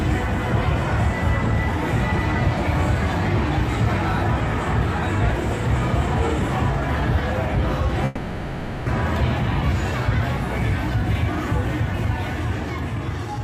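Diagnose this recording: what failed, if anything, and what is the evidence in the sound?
From 8.05 to 8.90 s the sound smears into a fading, buzzy continuation of itself, then resumes with about 600 ms missing and the timing shifted by roughly a fifth of a second. This is likely a long network dropout that the receiver concealed.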